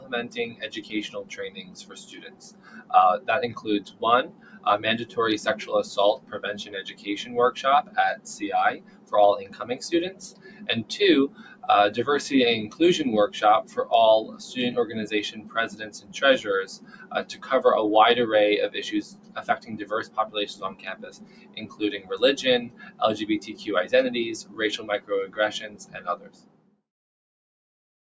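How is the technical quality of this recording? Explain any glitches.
The technical quality is compromised by a speech-tuned noise suppressor working on material it wasn't built for. The sound passes through call microphone processing that leaves nothing above 8 kHz, which is expected from that path.

Noise suppressor applied to music or sounds: This runs through the whole clip. The suppressor treats sustained tones, ambience and reverberant tails as background noise and pulls them down, while sharp onsets mostly pass. Its gain swings by something like 20 dB, so the sound pumps and thins as held material sinks. Unlike a compressor, which reacts to loudness, this reacts to steadiness. Loud sustained parts drop too, and quiet transients survive.

Sound cut by the noise suppressor: The deeper dips come at 0.0 to 5.17 s, 6.18 to 11.64 s, 12.69 to 14.41 s, 15.35 to 17.43 s and 19.03 to 26.82 s. 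In each span the suppressor judged parts of the sound to be noise and cut them by up to about 13 dB, or about 11 dB in the 12.69 s span. Only part of each span is hit: roughly 3 s, 2 s, under half a second, 1 s and 4 s. Sustains and decays sag or end early while attacks mostly come through. That separates it from a dropout, where everything vanishes at once regardless of character.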